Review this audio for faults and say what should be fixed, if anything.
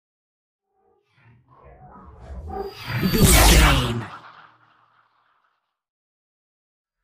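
Nothing here needs fixing; no faults were heard.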